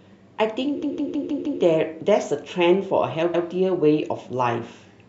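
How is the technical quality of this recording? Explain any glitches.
The recording has two stutters from repeated frames. At 0.82 to 1.61 s, a chunk of about 157 ms plays five extra times, which fits a short run of compressed frames being written again, and adds roughly 0.78 s. At 3.33 to 3.46 s, a 131 ms block repeats once. The decoder simply replays the same fraction of a second, so the speech jerks backward.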